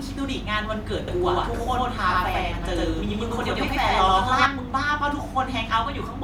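From 1.08 s to 4.46 s the speech carries a doubled audio track: a second full-band copy trails the first by roughly a tenth of a second at about the same loudness, most likely because the signal is picked up again through a slower path. Unlike an echo or room reverb, the copy does not fade or take on any room colour, and it switches on and off abruptly at both ends.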